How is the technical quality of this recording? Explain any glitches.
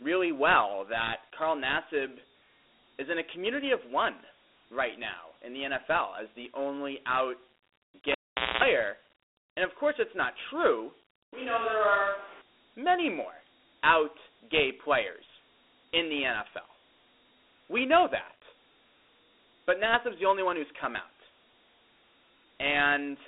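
The recording has clear technical problems: a narrow, gritty phone-line sound throughout, a brief dropout with a buzz, and a moment where the speech turns distant.

Across the whole clip the speech sounds boxed-in and grainy, with a rough hiss riding on each syllable. This is Dialogic VOX ADPCM coding: each sample is stored as a 4-bit step relative to a prediction, and those coarse steps leave audible quantisation grit. The band runs only from about 300 Hz to 3.6 kHz, with nothing above 3.8 kHz, which fits a 32 kbps stream at 8,000 samples a second.

From 8.12 to 8.64 s there is a pop, then the sound drops to near silence for about 0.47 s, including a 0.24 s burst of 60 Hz mains buzz, and a second pop as the speech returns. This is a cable pulled and plugged in: pulling it breaks the signal path, and while only the tip makes contact the floating conductor picks up hum from the mains.

Between 11.34 and 12.41 s the speech suddenly turns hollow and roomy, loses bass, drops about 5 dB in level, and gains background noise sitting around 25 dB below the speech. 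Both the change and the return are abrupt. The likely cause is a switch to a distant microphone: the close microphone's signal was briefly lost, and a mic farther away filled in, capturing more of the room's reflections and ambient noise.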